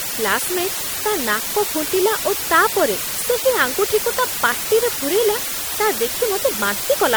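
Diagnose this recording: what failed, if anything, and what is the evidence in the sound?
Low bit depth with dither, at the sample-format conversion stage, runs through the whole speech clip. A constant, even hiss sits nearly as loud as the speech itself. It shows no gritty distortion that follows the signal, which rules out plain truncation. That fits about 4 bits with dither.

The second fault is MP3 compression at the codec stage, and it is audible throughout. A watery, swirling texture and smeared onsets flutter from moment to moment, unlike the steady hiss. Nothing sits above 21 kHz, a fixed treble cut. The likely cause is MP3 encoding at around 64 kbps.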